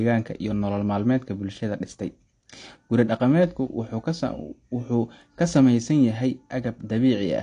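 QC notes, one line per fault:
Throughout, AAC compression: dull, smeared speech with nothing above 9.8 kHz, likely a low-bitrate AAC-LC encode near 32 kbps cutting bandwidth and coarsening detail.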